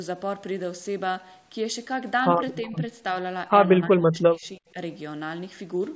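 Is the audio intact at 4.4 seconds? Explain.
No. From 3.86 to 4.77 s the speech dips by up to about 25 dB, in pieces totalling roughly 0.7 s, likely speech suppressed in double talk: the echo canceller mistook the talker for loudspeaker echo. Unlike a packet-loss gap, the sound is turned down rather than cut to silence.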